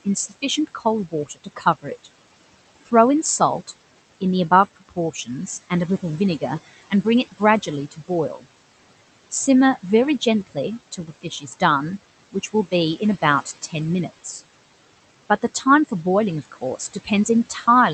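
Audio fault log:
throughout: noise suppressor artifacts. Between phrases the room noise, which sits about 18 dB below the speech, is pulled down by about 17 dB, then swells back whenever speech starts. The voice is carried across the 8 kHz band of the call codec. Unlike the clipped passages below, this is a constant texture on everything, not something that happens to particular syllables.
0.05–2.07 s, 4.77–8.44 s, 9.31–11.62 s, 12.32–14.41 s, 15.42–17.94 s: speech cut by the noise suppressor. In each span the suppressor mistakes quiet parts of the speech for background and turns them down with it. In the first three spans the deepest drop is about 15 to 16 dB, and in the last two about 12 dB. Only short pieces are hit, a few tenths of a second in each of the first four spans, so soft consonants and word endings sound swallowed or faint. That is what sets it apart from a dropout, where everything would go silent together.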